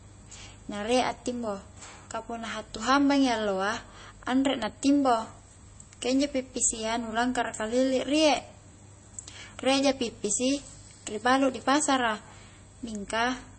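From start to finish, a steady mains hum at 50 Hz sits about 30 dB under the speech, leaking in from the power line; unlike rumble, it is a fixed pitched drone. Throughout, the speech also has a watery, swirling quality and nothing above 8.3 kHz, likely MP3 compression starved of bits, fitting roughly 32 kbps, not a plain low-pass filter, which would not swirl.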